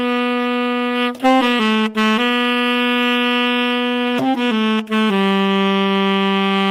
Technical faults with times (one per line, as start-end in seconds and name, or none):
none